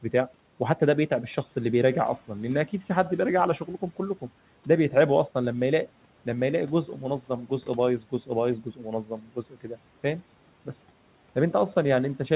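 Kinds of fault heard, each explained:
Speech cut by the noise suppressor: speech mistaken for noise was turned down, so parts of 8.64 to 8.86 s and 9.04 to 9.77 s sound swallowed, dipping about 11 and 12 dB. The waveform envelope sags there, and the spectrogram's speech bands fade toward the floor.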